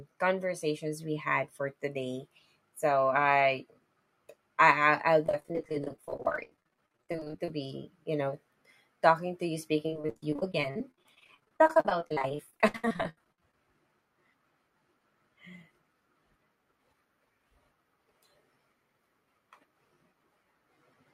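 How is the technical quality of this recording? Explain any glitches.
The recording has two stretches of repeated packet loss (robotic sound). The first runs from 5.24 to 7.54 s, just before "you know", and the second from 9.86 to 13.54 s, following "talking to you". Dozens of short dropouts, up to 28 ms and 75 ms long respectively, were each filled by extending the preceding sound, which conceals about 38% of each span. The speech comes out choppy, with pieces missing. On a spectrogram this shows as smeared, repeated harmonic bands, and the waveform shows blocky, looping segments.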